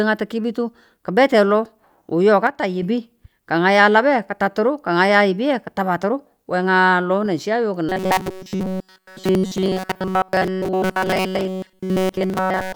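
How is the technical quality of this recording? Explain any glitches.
The recording has two clear glitches.

From 2.47 to 2.82 s, the speech suddenly drops about 6 dB. This is likely one channel dropping out before the mono sum.

From 7.89 s to the end, the speech becomes a rigid metallic buzz at 188 Hz. This is likely robotic sound from repeated short buffers, each lasting about 5 ms.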